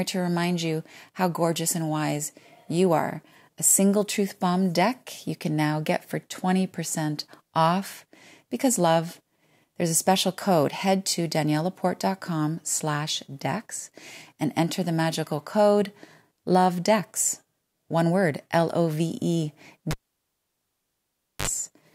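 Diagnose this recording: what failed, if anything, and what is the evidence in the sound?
A cable pulled and plugged in, from 19.91 s to 21.47 s, is a failure in the analogue wiring. The speech cuts off with a pop, and the line then sits near silent for about 1.51 s. As the plug goes back in, a burst of 50 Hz mains buzz lasting about 52 ms appears while only the tip touches the contact, with no ground path yet. A second pop follows as full contact returns the signal.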